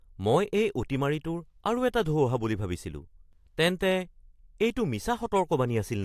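No technical faults can be heard anywhere in this speech recording. At no moment does the sound falter or depart from its normal course.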